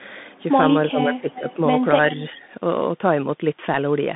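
From start to finish the speech carries the sound of a Bluetooth CVSD headset codec, which fits a 64 kbps CVSD link. Each sample is coded as a single up or down step, and the line passes only about 150 Hz to 3.6 kHz. Sibilants come out scratchy, loud bright syllables overrun the adapting step and distort, and a granular hiss sits beneath everything. On a spectrogram the energy stops sharply near 3.6 kHz, with a grainy noise floor across the band.

Between 0.9 and 1.58 s the voice dips, totalling roughly 0.4 s, with the deepest drop around 15 dB. This is likely speech suppressed in double talk: the echo canceller could not tell the talker from loudspeaker echo while both sides spoke, so it pulled the level down. The waveform shows ragged notches in the envelope.

Inside that stretch, from 1.32 to 1.54 s, a faint delayed copy of the voice trails 384 ms behind, around 20 dB below the speech. 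This is likely an echo leak, where the far end's canceller let part of its loudspeaker pickup return down the line. On a spectrogram it appears as a weak duplicate of earlier harmonic patterns, shifted later in time.

From 2.3 to 2.45 s a shorter, gentler suppression, likely again from double talk, dips the voice by about 5 dB for roughly 0.15 s, seen as a shallow trough in the waveform.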